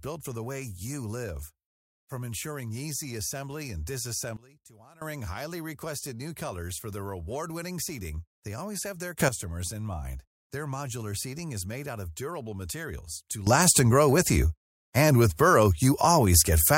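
After "ensuring easy assembly and", the speech and background suddenly drop about 20 dB from 4.37 to 5.02 s. They leap about 13 dB after "they always have their" (9.20 to 9.29 s), then about 15 dB after "of durable materials to" from 13.47 s onward. These are sudden gain jumps, likely unramped digital gain changes.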